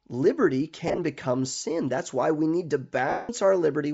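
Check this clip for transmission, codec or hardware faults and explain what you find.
Two faults are audible in this speech. Bluetooth LC3 compression runs throughout, and two bursts of lost LE Audio frames occur. Throughout the clip, the speech carries a breathy, grainy edge. The likely cause is Bluetooth LC3 compression at a low rate, around 32 kbps, where noise fills the stripped upper spectrum. Lost LE Audio frames occur from 0.88 to 0.99 s as scattered gaps totalling 70 ms, the longest about 30 ms. The decoder repeats the last spectrum with random signs, giving a noisy smear. From 3.10 to 3.29 s, a 190 ms loss begins as the same smear, then fades gradually toward silence.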